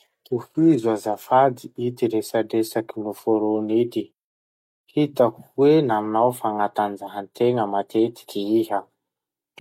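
Nothing goes wrong technically anywhere in this speech recording, so there's no fault to point to at any moment.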